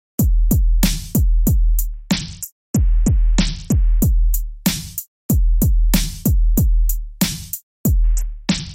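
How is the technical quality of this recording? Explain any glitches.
Two stretches sound dull and gritty, from 1.93 to 4.00 s and from 8.03 s to the end. It is a Bluetooth SBC bit pool drop: a congested link cut the encoder's budget, which points to a bit pool falling from 31 to 7, around 61 kbps. The top sub-bands lost their bits, so the treble dulls, and coarse quantisation of the rest adds the grit.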